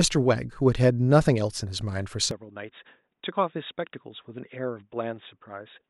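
At 2.31 s the speech turns dull and quieter through the end: the input likely switched to a poorer device. The spectrogram shows nothing above 3.8 kHz, and the waveform drops by roughly 10 dB, with a faint new noise floor.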